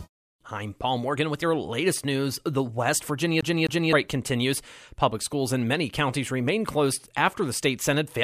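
From 3.41 to 3.93 s the speech hits a CD stuck on one turn: a 260 ms slice repeats twice with brief mutes, showing as identical repeated waveform blocks separated by thin gaps.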